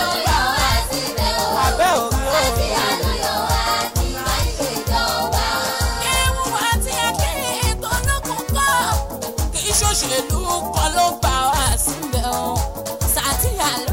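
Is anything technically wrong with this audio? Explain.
Yes. From 7.23 to 9.17 s and again from 11.97 to 13.86 s, the sound runs about 6% fast and rises about 100 cents, a semitone, before snapping back. This is likely a drift correction step, where clock-matching software briefly changed the playback rate to rebalance its buffer.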